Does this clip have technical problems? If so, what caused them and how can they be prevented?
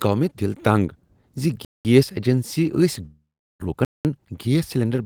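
Yes. Gap between chunks: the sound is cut by silent holes of 200 ms, from 1.65 to 1.85 s and again from 3.85 to 4.05 s. That pattern fits audio handled in 2-second chunks, with padding or a late start leaving silence at each join. Nothing is lost; the flow just stops and restarts. To prevent it, trim codec padding and schedule each chunk to begin precisely where the previous one ends.

Long network dropout: from 3.05 to 3.64 s the sound turns into a fading buzz-like continuation of what came before, then about 370 ms of near silence, and resumes with roughly 400 ms of material simply gone. This is likely a stall in packet delivery, during which the receiver concealed the missing audio for a while before giving up. The delay shifted by around 150 ms. To prevent it, use a more stable network path and add forward error correction or redundancy.

Jitter buffer speed-up: from 3.71 s to the end at 5.05 s, the audio runs at about 111% speed while keeping its pitch, so it sounds hurried. 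After the stall, delayed packets arrived in a burst, and the buffer held more than its target. The receiver then repeatedly removed short pitch-period slices to catch up. To prevent it, reduce delivery bursts and let the buffer drain more gradually after a delay spike.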